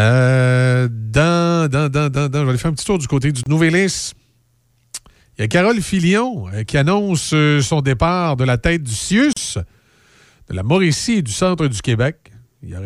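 A gap at a join of encoded pieces opens at 3.43 s, after "tour du côté du", lasting 28 ms, and again at 9.33 s, after "de la tête du", lasting 36 ms. Separately encoded segments were butted together with their start-up delay and last-frame padding untrimmed, so the speech drops to silence with smeared edges, then resumes where it stopped.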